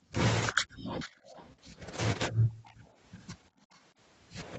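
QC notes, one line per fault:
0.0–0.13, 0.63–0.84, 2.31–2.63, 2.81–2.85, 3.55–3.6 s: background gated by the echo canceller. Room sound ducks up to about 40 dB (about 20 and 13 dB at the last two), then returns. These are mic-side gain dips, not codec dropouts.
0.84–1.69, 2.63–2.94, 3.73–3.79 s: echo leak. A copy of the voice repeats 355 ms late, about 20, 30 and 35 dB down, likely residual loudspeaker pickup the canceller missed. It is a discrete delayed repeat, not smooth room reverb.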